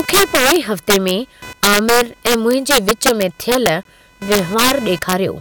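Computer activity noise runs through the whole of this speech recording as a buzz pulsing at roughly 500 Hz, sitting around 25 dB below the voice. It follows the machine's processing load rather than the talker, because changing current draw shifts the ground shared with the audio circuitry. Integer overflow is also present throughout: the signal is driven about 6 dB past full scale, and instead of being limited, the loudest samples, on the order of one or two percent, wrap to the opposite sign, producing harsh cracks on loud syllables that are far sharper than ordinary clipping. A gap between stream segments opens from 3.83 to 3.85 s, a hard-edged silent hole of roughly 20 ms. It comes from mismatched time stamps at a segment boundary, consistent with 2-second segments, which the player fills with silence without losing any audio.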